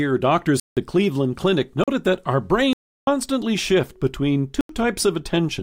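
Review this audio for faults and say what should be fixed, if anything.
Blocks of digital silence at 0.60–0.77 s, 1.84–1.88 s (just before "that our"), 2.73–3.07 s (between "that our" and "shift between") and 4.61–4.69 s. Each drops abruptly to silence, unlike a faded dropout. Three of the lengths fit whole 4096-sample buffers, likely ones the output failed to fill. To prevent it, give the audio callback more processing headroom or a larger buffer so it never underruns.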